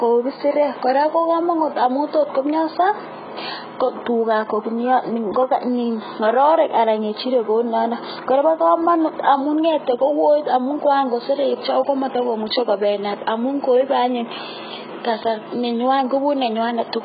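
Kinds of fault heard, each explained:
AAC compression: Throughout the speech the sound is dull and smeared, with heavy warbling, fizzy sibilants and missing upper bands. This likely comes from AAC-LC coding at a very low bitrate, which fits about 12 kbps, where the encoder cuts high frequencies and noise-fills bands.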